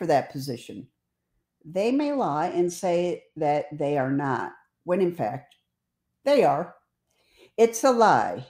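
From 1.89 s to 4.38 s the speech goes through a Bluetooth SBC bit pool drop. The link likely got congested, so the sender cut the bit pool to keep audio flowing. The dulling fits a fall from about 28 to 12, near 96 kbps. The highest sub-bands lose their bits. The rest are coarsely quantised. The treble turns dull and a gritty noise rides on the speech. Clarity returns just before "when in fact".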